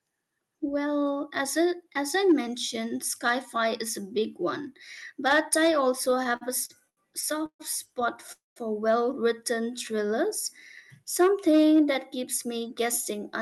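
Speech carried over a call path whose top end stops near 12 kHz, which fits Opus at around 40 kbps. From 6.05 to 6.99 s there are repeated stalls (stutter): eight brief hold-ups, the longest 76 ms, where the last sound is stretched to cover late packets. About 216 ms is filled, roughly a quarter of that span, so the audio drags and catches but no content drops out. Two call audio freezes follow, at 7.46 to 7.61 s and at 8.32 to 8.58 s. In each, the sound smears into a fading buzz or hiss, with about 80 ms and then 160 ms of outright silence, before resuming exactly where it stopped. The likely cause is packets held up in transit draining the jitter buffer, which inserted gaps of 136 ms and 240 ms. From 9.71 to 10.28 s a jitter buffer slow-down repeats single pitch periods to rebuild its reserve, adding 57 ms. The speech runs at about 91% speed at unchanged pitch and sounds slightly drawn out.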